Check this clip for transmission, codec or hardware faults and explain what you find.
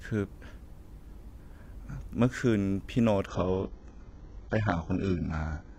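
One transmission fault is present, an adaptive stream at a lower bitrate, from 3.27 s to the end. The player switched mid-stream to a much cheaper encoding, which fits a drop from roughly 96 kbit/s AAC to a very low-rate HE-AAC stream, when the connection could no longer sustain the higher rate. From that point the speech loses everything above 7.9 kHz, and codec artefacts rise sharply. The quality change is abrupt, with no gap or dropout at the switch.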